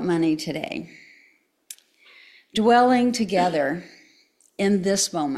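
No technical faults can be heard anywhere in this recording.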